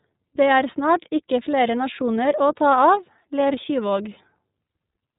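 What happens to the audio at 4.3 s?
The iLBC codec is at work at 4.3 s, as it is across the whole clip. This narrowband VoIP codec codes each frame's excitation on its own, without drawing on the previous frame, and here it uses 30 ms frames at 13.33 kbps. Nothing above 3.8 kHz survives, so the speech sounds muffled and boxed-in, with a plainly audible rough, synthetic grain.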